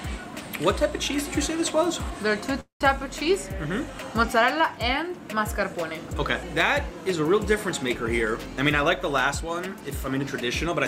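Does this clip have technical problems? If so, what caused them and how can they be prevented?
Yes. From 2.60 to 2.81 s the sound stops and is bridged for about 200 ms: a brief fading buzz from the last sound, then about 130 ms of silence, after which the audio resumes exactly where it left off. This is a call audio freeze, likely from packets held up in transit until the jitter buffer ran empty. Unlike packet loss concealment, nothing is skipped; a gap is inserted, adding about 200 ms of delay. Prevention is a steadier network path, with traffic prioritised for the call, and a jitter buffer sized to absorb such delays.

From 8.47 to 10.68 s the audio runs at about 106% speed with its pitch unchanged, sounding slightly hurried. This is a jitter buffer speed-up: the receiver trimmed pitch-period-length pieces over and over, dropping roughly 150 ms in total to shed built-up delay. Unlike a resampling error, the pitch does not rise. 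Gentler, more gradual buffer adaptation would keep the catch-up less audible.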